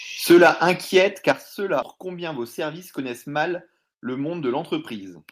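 At 1.29 to 1.31 s the loudest peak of the speech turns harsh and crackly, with its tops flattened about 3 dB past the converter's limit across a small share of samples. This is microphone overload, likely from the input volume being set too high, so the converter ran out of headroom. Unlike codec distortion, which smears the sound more evenly, the grit here appears only on that one peak.

Right after, at 1.32 to 1.33 s, the microphone volume steps down by about 8 dB in a single jump. It is probably software reacting to the overload. Voice and background noise drop together and instantly, which sets it apart from a noise gate or a gradual fade.

From 1.82 to 1.96 s playback skips ahead. Roughly half a second of speech is missing, and the audio on either side is spliced together with no silence or filler. That direct join is what distinguishes this from a dropout, which leaves a hole. Here the speech simply lurches forward mid-flow, as if the jitter buffer discarded a backlog to catch up.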